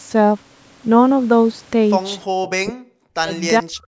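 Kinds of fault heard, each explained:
Echo leak: A faint, delayed copy of the speech slips through from 2.45 to 2.5 s. It arrives 434 ms late, around 20 dB below the speech. An echo canceller on a loudspeaker side likely missed part of its microphone pickup.
Speech suppressed in double talk: The speech falls away sharply, by around 40 dB at worst, from 2.57 to 3.34 s and from 3.6 s to the end. Both sides likely talked together, and the echo canceller turned both down.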